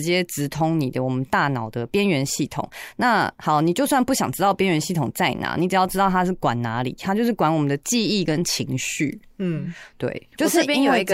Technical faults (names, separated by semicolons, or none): none